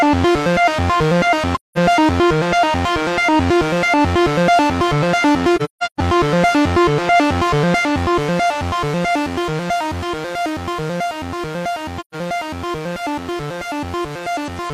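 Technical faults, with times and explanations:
1.55–1.78 s, 5.56–6.00 s and 12.00–12.15 s, AAC frame loss with muting: lost frames were decoded as silence, leaving soft-edged holes of about 0.21 s, a broken patch of about 0.43 s with runs up to roughly 0.15 s, and about 0.13 s. Window overlap fades the sound out and back in.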